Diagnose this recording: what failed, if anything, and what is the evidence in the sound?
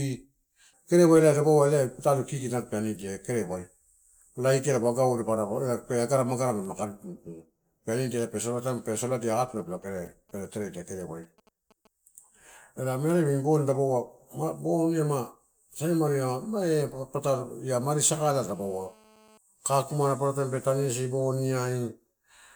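From 9.35 to 11.87 s the analogue wiring picks up GSM signalling bursts: a galloping dit-dit-dit of ticks and brief buzzes at 217 Hz, well below the speech. A nearby 2G phone's radio pulses are rectified in the circuit. Unlike a call's buzz, it arrives in short clusters.

From 18.00 to 19.38 s, ending just before "kakumana paparataim", a GSM phone buzz sits in the analogue stage: a hard, raspy 217 Hz tone rich in harmonics, about 31 dB below the speech. Rectified call-mode transmit bursts make it continuous rather than broken into ticks.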